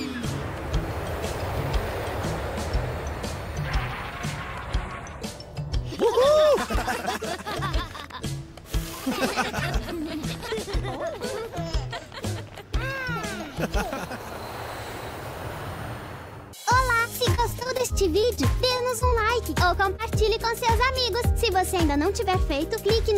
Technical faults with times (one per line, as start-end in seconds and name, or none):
17.23-18.39 repeated packet loss (robotic sound)
18.77-19.22 repeated packet loss (robotic sound)
19.96-20.00 short concealed packet loss